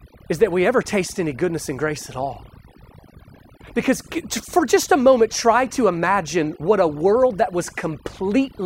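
Throughout the speech, overdone noise removal strips individual frequency bands whenever they sink toward the estimated noise floor, taking quiet vocal detail with them. The background drops and breaks up into twinkling specks. A spectrogram shows scattered isolated dots between syllables.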